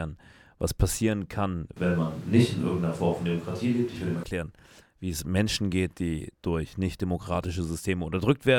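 From 1.77 to 4.24 s, right after "was passieren kann", the speech switches abruptly to a distant microphone, likely because the close microphone dropped out. It turns roomy and hollow with thinner bass at roughly unchanged level, room noise roughly 30 dB down, then snaps back.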